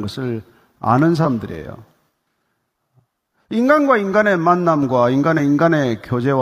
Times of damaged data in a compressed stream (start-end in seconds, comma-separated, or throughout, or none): 1.21-1.25, 5.34-5.40